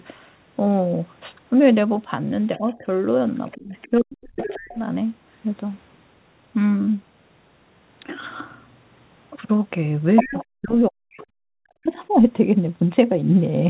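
A speech recording with several faults around the other party's audio. Short bursts of the other side's voice leaking through appear at 2.56 to 2.78 s, 3.49 to 3.78 s, 3.98 to 4.78 s and 10.16 to 10.45 s. They start very faint, build to clearly audible by the fourth second, and at 10.16 s reach roughly the level of the main talker. This is likely a loudspeaker echo that the echo canceller failed to remove. It differs from crosstalk or a second person in the room because it is the other side of the call played back through the loudspeaker. Overlapping these moments, the main talker's speech is suppressed in double talk: a dip of about 10 dB from 2.58 to 2.84 s, then much deeper cuts of about 40 dB from 3.56 to 4.77 s, 10.25 to 11.23 s and 11.62 to 12.21 s. This points to the canceller likely ducking the near end while the far end talks, not to packet loss, which would cause gaps regardless of the other voice. 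The audio has nothing above 4 kHz, which fits a narrowband telephone codec such as G.711.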